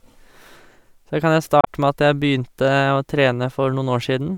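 At 1.61 s the speech is broken by a brief glitch that lasts until 1.68 s. This is damaged data in a compressed stream. Some bytes in that stretch of the compressed file are wrong. The decoder cannot read those frames properly. It loses its place in the stream and hunts for the next valid frame header. The roughly 70 ms of garbled output in between comes out as a short glitch.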